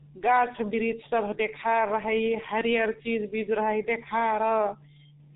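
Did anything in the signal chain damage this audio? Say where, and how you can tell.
Yes. G.723.1 codec damage runs throughout the speech. Nothing is left above 3.8 kHz, and consonants blur into a muffled, hoarse texture. This fits a roughly 6 kbit/s coder with 30 ms frames whose slowly updated voice model cannot follow rapid articulation.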